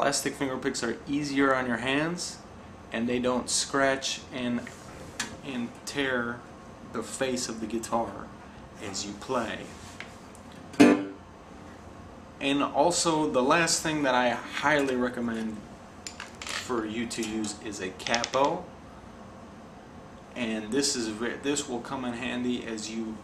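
No technical faults can be heard anywhere in this audio.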